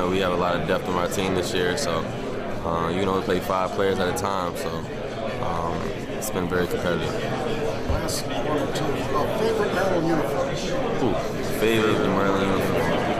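From 11.43 s to the end, a doubled audio track: a dry copy about 5 dB quieter lags by about 150 ms, likely from a second capture path or misaligned edit.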